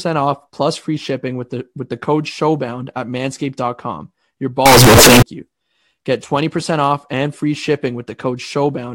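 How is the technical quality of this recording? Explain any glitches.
The recording has one clear glitch in the speech. From 4.66 to 5.22 s the sound turns suddenly very loud and harsh, with a buzzy, squared-off quality. Background noise rises to the same level as the speech. Pitch can still be followed. The likely cause is a float read as integer fault. 32-bit float samples were read as 32-bit integers. The sign and exponent bits then set each value, so the waveform flattens into near-square blocks at an almost fixed, high level.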